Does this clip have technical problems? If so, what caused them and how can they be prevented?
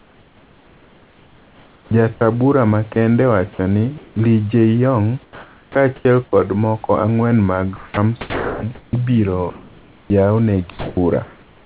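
Yes. Sound chopped by the voice detector appears from 0.00 to 2.96 s and again from 7.76 s, after "kod moko ang'wen mag", to the end. The likely cause is the sender's voice activity detection toggling repeatedly, so roughly 2 seconds in each stretch became synthetic fill, leaving choppy sound. Lowering the detector's sensitivity threshold or adding hangover time prevents this.

Comfort noise in place of the background occurs at 3.98–4.16 s and 5.24–6.05 s, just before "kod moko ang'wen mag". The sender likely halted transmission during pauses, and the receiver substituted steady, featureless noise, about 2 dB quieter in the first gap, for the genuine room background. Disabling discontinuous transmission keeps the real background.

Sound dropped by the voice detector occurs at 5.96–6.05 s, just before "kod moko ang'wen mag". The detector likely misjudged part of the speech as background and stopped sending, so about 50 ms of speech became comfort noise before transmission resumed. 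A longer hangover and a lower trigger threshold would prevent this.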